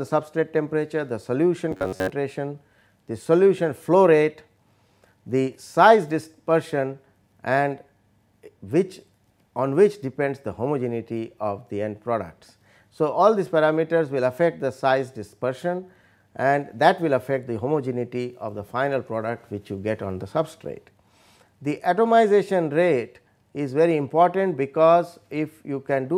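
From 1.71 to 2.11 s the sound turns into a rigid, metallic buzz near 93.8 Hz: robotic sound from repeated short buffers, likely a roughly 10.7 ms chunk looped while fresh audio ran late. Most of that stretch is repeats, shown as evenly spaced identical waveform cycles and sharp harmonic lines on a spectrogram.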